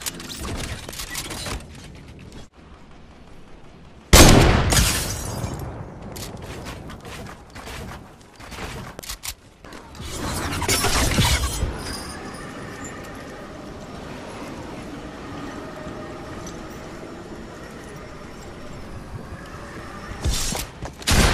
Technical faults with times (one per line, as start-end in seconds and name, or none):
19.34-19.39 DAB burbling